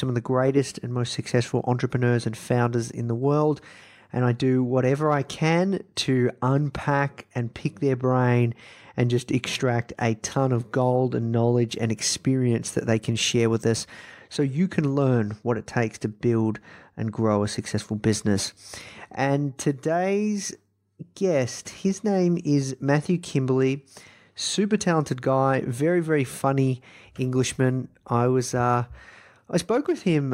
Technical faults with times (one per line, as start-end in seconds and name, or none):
none